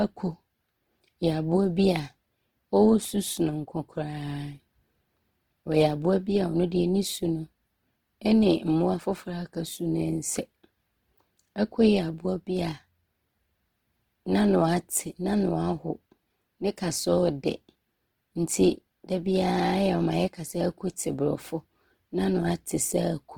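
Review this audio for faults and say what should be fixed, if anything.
Throughout the speech there is plainly audible Opus compression: the sound is rough and grainy rather than clean. This most likely comes from a low bitrate in the region of 16 kbps. Content still reaches about 20.1 kHz, which points to the encoder's full-band music (CELT) mode rather than its muffled, hoarse speech mode. In CELT mode the energy of each band is kept, and bands short of bits are filled by folding lower bands or with noise. That leaves few spectral holes, so the damage sounds grainy, not the swirling, watery texture of MP3. To prevent it, encode at a higher Opus bitrate or work from the uncompressed original.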